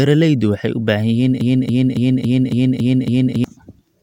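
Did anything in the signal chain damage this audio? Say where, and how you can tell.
Yes. A stalled player, encoder or stream likely kept resending the last fragment it held, producing a broken-record loop from 1.41 s to 3.44 s. A 0.28 s piece of speech repeats exactly seven times back to back, and the speech that should have filled that span is lost.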